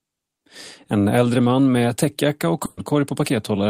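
At 2.65 s, after "man med täckjacka och", a burst of packet loss drops 120 ms. The last sound holds, fades, then jumps ahead.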